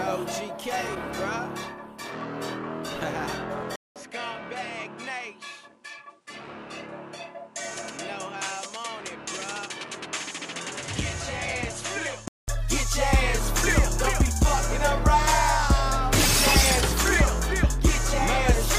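At 3.76 s a 200 ms silence is followed by quieter sound, roughly 10 dB down, with nothing above 11.4 kHz and a new faint background noise. Clarity returns at 12.48 s. The gap and changed noise floor, rather than a simple filter, suggest the input likely switched to a poorer device.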